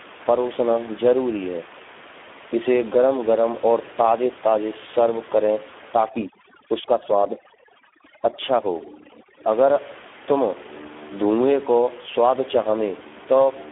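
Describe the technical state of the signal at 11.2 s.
At 11.2 s the speech carries Speex codec damage, present throughout the clip: a low-bitrate CELP coder, likely near 8 kbps, starves the excitation, leaving hoarse, buzzy, robotic speech limited to about 250 Hz to 3.5 kHz, with nothing above 3.8 kHz. Unlike simple band-limiting, the voice itself sounds synthetic.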